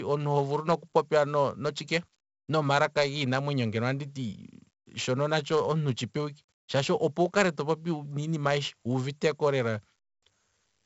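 A gritty hiss rides on every loud syllable throughout, with roughness on sharp consonant attacks and nothing above 7.7 kHz. This is heavy 4-bit ADPCM compression: coarse predicted steps add level-following noise and lag on sudden jumps, which fits about 64 kbps.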